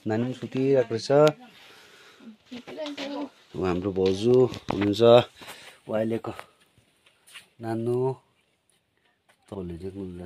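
At 9.55 s, compressed frames are skipped. About one 93 ms frame goes missing. The audio jumps ahead roughly 100 ms.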